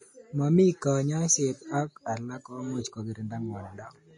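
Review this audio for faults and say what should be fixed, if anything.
The speech carries codec damage throughout, with hiss and a grainy texture. Nothing remains above 10.5 kHz. The likely cause is Vorbis compression. Fine treble detail has been replaced by noise, and attacks are blurred. The damage fits a low bitrate near 32 kbps. Encode at a higher Vorbis quality setting, or keep a lossless master for review.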